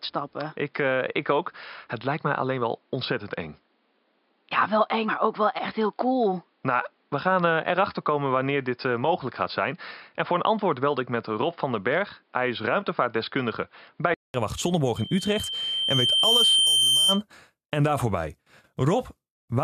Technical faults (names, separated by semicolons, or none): input switched to a poorer device; compressed frames skipped; loudspeaker feedback squeal